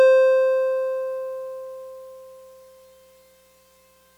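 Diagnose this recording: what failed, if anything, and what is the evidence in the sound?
Nothing failed in this music recording, and the sound shows no evidence of any fault.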